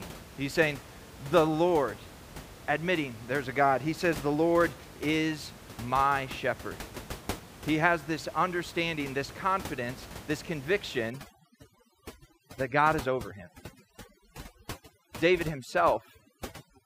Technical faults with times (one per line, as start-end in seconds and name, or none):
11.10-16.85 overdone noise removal